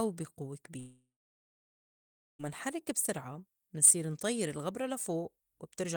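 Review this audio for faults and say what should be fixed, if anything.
A long network dropout runs from 0.79 s to 2.41 s, right after "بي قوّة". The last sound is stretched into a fading buzz for a few tenths of a second, then about 1.31 s of near silence follows until the audio resumes at "نحرّك بسرعة منصير انطيّر". About 1.6 s of speech is simply missing, which is most likely a stall in packet delivery that the receiver's concealment covered only briefly. Preventing it calls for a more stable network path, redundancy or forward error correction, and a deeper jitter buffer on the receiving end.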